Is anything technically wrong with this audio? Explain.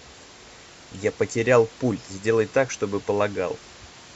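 No, nothing here points to a technical fault in this speech clip. A faint room noise sits about 24 dB below the speech, which belongs to the recording space rather than the system.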